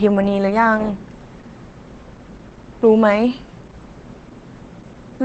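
Opus voice compression affects the whole speech clip. Nothing remains above 8.6 kHz, so the band is cut to wideband. The linear-prediction SILK coder codes the excitation coarsely. The damage is plainly audible: muffled, hoarse, slightly robotic speech. That fits a bitrate near 12 kbps.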